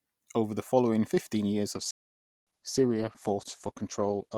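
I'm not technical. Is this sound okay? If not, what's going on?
No. From 1.74 s to the end, the speech plays as an adaptive stream at a lower bitrate. The streaming service switched to a smaller, cheaper version of the audio, so the speech picks up more coding artefacts, with no gap at the switch.

Shortly after, from 1.91 to 2.47 s, there is a playback stall. The sound cuts out mid-flow for just over half a second, then carries on. The likely cause is that the player briefly ran out of incoming data and went silent until more arrived.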